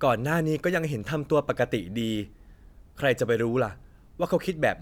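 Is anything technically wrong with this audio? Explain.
No, nothing in this speech recording points to a technical problem. No fault can be heard at any point in the audio.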